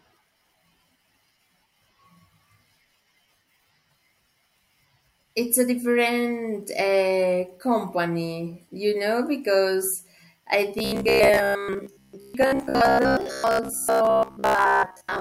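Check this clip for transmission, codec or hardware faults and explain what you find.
One fault affects the end of the clip: robotic sound from repeated short buffers, from 10.79 s, right after "you know because I", to 15.2 s. New audio is likely arriving too seldom, so playback fills the gaps by looping a short stretch, roughly 15 ms, while the real signal is skipped. The loops recur for most of that stretch and impose a fixed buzz near 66.8 Hz, turning the speech into a rigid, metallic drone that only loosely follows it.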